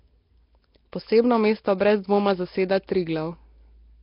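Speech here, and the whole thing has that rough, hissy, underwater smear with nothing above 5.3 kHz, likely Nellymoser compression at a low rate, around 22 kbps.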